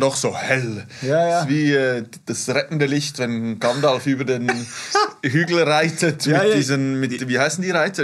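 No technical faults are audible.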